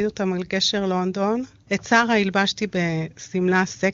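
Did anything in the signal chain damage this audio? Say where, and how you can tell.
No, nothing in the signal chain stood out as damaging this speech on listening, and it arrives over an AMR wideband (HD Voice) link running at its top rate of 23.85 kbit/s.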